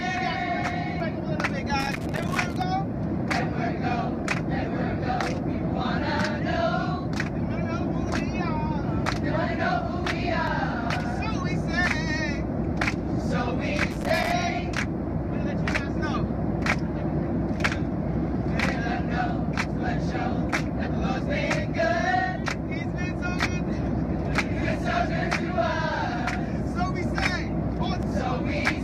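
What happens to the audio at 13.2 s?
Nothing goes wrong at 13.2 s; the audio plays through that moment intact, with no dropout, click or distortion.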